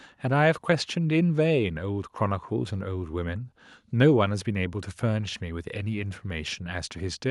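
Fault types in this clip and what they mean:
No faults detected in the speech signal.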